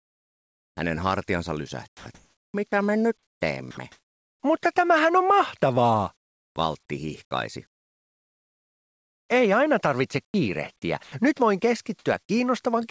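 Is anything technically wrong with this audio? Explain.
Yes, there are a few problems, all in how the quiet stretches were handled.

Comfort noise replaces the background at 0.0 to 0.77 s, within 1.88 to 4.43 s (about 1.3 s of it), at 6.17 to 6.56 s and at 7.67 to 9.29 s. The sender likely went into discontinuous transmission, so the receiver filled the gaps with synthetic noise. You lose the real background's texture and get a flat hiss, about 7 dB quieter at the start, about 12 dB at 6.2 s and about 24 dB at 7.7 s.

Sound is dropped by the voice detector at 3.71 to 3.77 s, a 60 ms piece inside that second comfort-noise stretch. The detector likely took a quiet bit of sound for background and stopped sending, so those 60 ms turn into the same steady noise before the sound picks back up.

Sound is chopped by the voice detector between 10.25 and 11.12 s. The detector likely switched between sending and not sending more than once over that span, swapping about 180 ms in total for comfort noise. 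It comes across as choppy, with holes in the sound. The call path's top end stops at 8 kHz, which fits a G.722 wideband codec.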